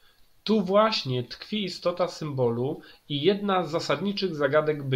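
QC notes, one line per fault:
No faults heard in this speech recording; nothing to log.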